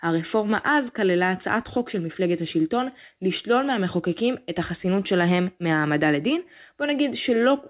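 No technical faults can be heard in the clip. The speech comes through a working call path whose bandwidth stops at 4 kHz, which fits a narrowband G.711 mu-law codec.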